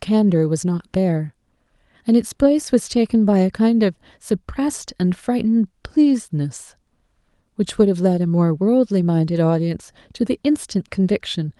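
Nothing faulty is audible anywhere in this speech recording.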